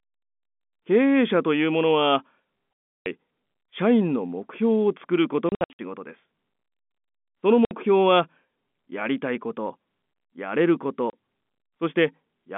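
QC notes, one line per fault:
2.74–3.06 s, 5.49–5.79 s, 7.65–7.71 s and 11.10–11.13 s: packet loss filled with silence. Speech drops to dead silence with hard edges. The gaps total 330, 210 (scattered over 300 ms), 60 and 30 ms. This fits 30 ms packets.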